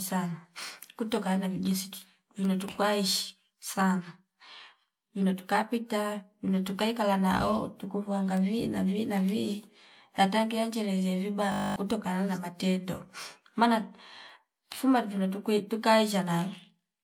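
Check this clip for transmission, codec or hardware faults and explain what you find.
One fault is present, a system hang loop from 11.52 to 11.76 s. The computer or its audio driver stalled. The sound hardware kept playing anyway, cycling through the same stretch of its ring buffer. That stretch is 20 ms long, which fits a buffer of that size. It repeats exactly, 12 times over, at 50 Hz. With so short a loop, the speech collapses into a steady 50 Hz buzz. About a fifth of a second of real audio is lost.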